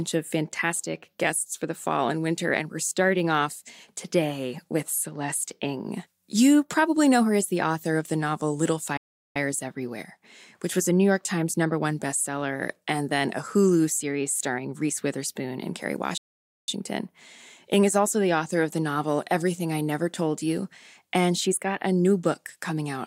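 Speech that drops to dead silence twice, from 8.97 to 9.36 s (0.38 s) and from 16.18 to 16.68 s (0.50 s). Each is a playback stall, likely the player starving for data. The waveform goes flat and the spectrogram shows a blank vertical band before the sound resumes.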